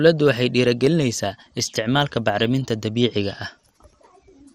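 MP2 compression damage runs throughout this speech recording: the sound is dull and carries a gurgling, granular roughness, with nothing above 15.8 kHz. The likely cause is MPEG Layer II coding at a low rate, consistent with about 64 kbps. The encoder splits the signal into 32 sub-bands and, short of bits, switches upper bands off and quantises the rest coarsely, so bands flicker in and out and the damage is plainly audible.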